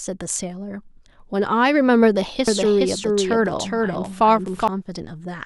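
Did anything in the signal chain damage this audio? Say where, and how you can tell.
Yes. From 2.48 s to 4.68 s the speech is doubled. A second full-band copy trails the original by roughly 400 ms, sitting about 5 dB lower. It has no decay and no added room tone, so it is not a reflection. It starts and stops abruptly at those times. This is a doubled audio track. The likely cause is capture routing: a slower second path records the same signal and gets mixed back in out of step.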